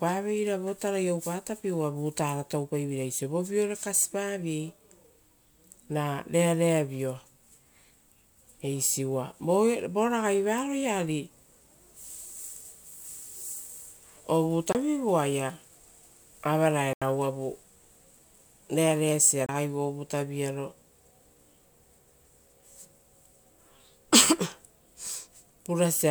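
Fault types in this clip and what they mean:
Bluetooth stall: The speech cuts to silence three times, for 24, 84 and 25 ms, then resumes. Delayed wireless packets likely emptied the playback buffer.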